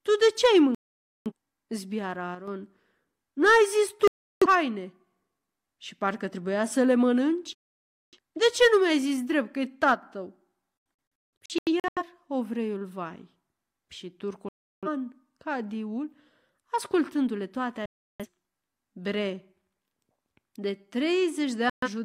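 At 0.75 s, just after "ce ai", a digital broadcast dropout mutes the speech until 1.32 s. The receiver stopped getting good frames and went silent. About 0.51 s of programme is lost, which fits frames of roughly 43 ms each. At 2.35 s a sudden gain jump drops the level by about 6 dB in a single step. Speech and background noise fall together. A gain change applied without a ramp is the likely cause.

A dropout at 4.08 s cuts out 0.34 s. Another follows at 7.53 s, right after "parcă trebuia să le", silencing 0.6 s. At 9.94 s, after "zis drept că e", a second sudden gain jump lowers everything by about 4 dB, again likely from an unramped gain step.

From 11.19 s the dropout breaks into several short holes spread over about 1.2 s. The longest hole is 0.17 s. Further dropouts mute 14.49 s and 17.86 s for 0.34 s each, and 21.70 s for 0.13 s. Each time, the missing sound never returns. The programme simply resumes further on.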